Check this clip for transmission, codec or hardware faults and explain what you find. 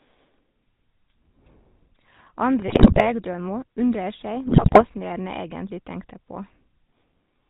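Two faults here, and both come from a GSM phone path.

The whole clip runs through the GSM full-rate codec, and the damage is plainly audible. It sounds like the 13 kbps full-rate coder. That coder models the vocal tract with a filter and excites it with a sparse train of regularly spaced pulses, so the speech comes out with that familiar buzzy, gravelly edge. It's also cut off at 4 kHz, so everything sounds dull and boxed-in up top.

Then there are two bursts of GSM bit errors, from 2.68 to 3.07 s and from 4.46 to 4.85 s, each lasting roughly 0.4 s. The break-up suggests a bit error rate of about 7%, hitting fifteen or so frames. Corrupted bits land in the decoder's filter, pitch and gain parameters, so frame by frame the spectrum warps and the level jumps. You hear it as squawks, pops and a gargling smear in both spots.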